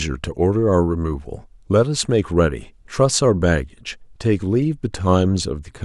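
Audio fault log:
Nothing stood out on listening to this speech recording.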